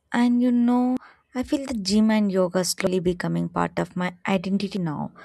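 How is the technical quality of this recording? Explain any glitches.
The recording has three abrupt skips in the speech. At 0.97, 2.87 and 4.77 s the sound jumps forward about a tenth of a second with no gap. The steady 1.9 s spacing points to audio likely missing between chunks, with a piece dropped at each boundary of roughly 2 s recording blocks.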